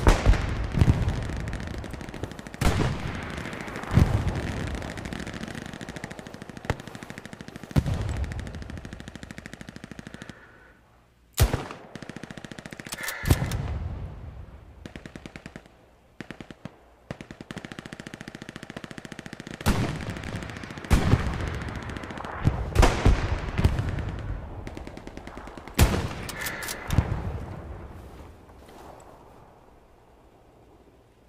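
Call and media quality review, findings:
CD skip at 20.24 s: tick, a few ms of mute, then playback resumes elsewhere. Probably the transport; a knock or disc flaw bumped the laser onto another spiral turn.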